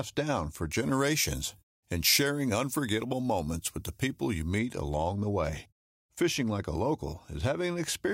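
From 0.71 s, just after "down for", until 4.59 s, where "along the way" follows, the speech turns thin, bright and hissy, with sibilants spitting forward. This is pre-emphasis left on: the treble was lifted for transmission and the matching de-emphasis cut was never applied, leaving high frequencies about 10 dB too strong at 10 kHz relative to 1 kHz. The shape of the tilt fits a 50-microsecond FM pre-emphasis curve.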